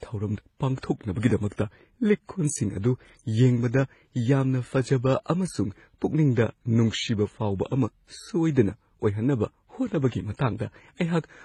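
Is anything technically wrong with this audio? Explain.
Yes. Throughout the speech, two kinds of coding artefact are heard together: watery, smeared transients and a hissy, synthetic-sounding top band. This is likely transcoding between lossy codecs, which fits a low-rate MP3 re-encoded as HE-AAC at about 20 kbit/s. The second encoder spent its few bits on the first encoder's damage. A spectrogram would show a hard high-frequency cut-off and patchy, copied-looking bands above it.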